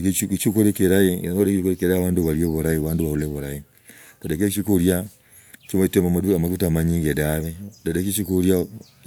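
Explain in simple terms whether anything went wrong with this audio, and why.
Nothing went wrong here; no technical faults can be heard anywhere in the recording.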